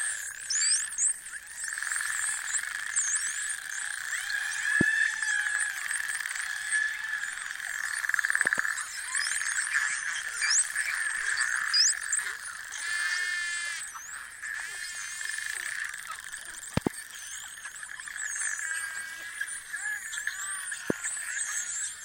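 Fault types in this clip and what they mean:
Loud pop: six sharp thumps, likely voltage steps from a plug, switch or static, peak about 20 to 25 dB above the sound, which continues underneath. Those near 8.5 s and 16.8 s are doubled. Unlike a dropout, nothing is removed from the signal.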